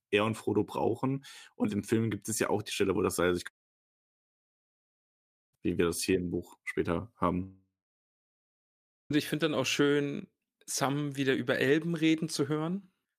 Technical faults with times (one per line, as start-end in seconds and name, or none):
3.47-5.55 long network dropout
7.43-9.12 long network dropout